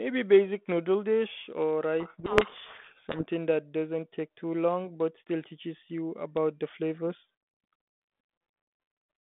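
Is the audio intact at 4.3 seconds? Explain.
Yes, the audio at 4.3 seconds is intact, and what is heard there is the telephone-band sound of a G.726 ADPCM link at 32 kbit/s, limited to roughly 150 Hz to 3.5 kHz.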